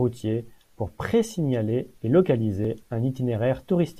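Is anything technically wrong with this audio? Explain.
Yes. At 2.65 s, just after "pour présignaler et", a dropped buffer (overrun) likely occurred: the samples weren't collected before being overwritten, so a millisecond or two vanished and the surrounding speech was butted together, heard as a tiny jump.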